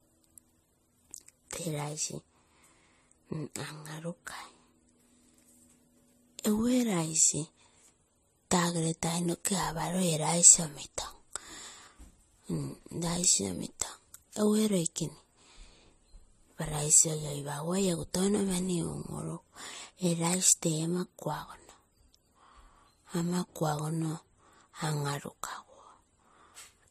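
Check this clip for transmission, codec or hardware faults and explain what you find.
There is one codec fault, present throughout the speech. It sounds like transcoding between lossy codecs. Nothing is heard above 14.1 kHz. Two sets of compression artefacts overlap, likely from MP3 re-encoded as AAC-LC at similar low bitrates.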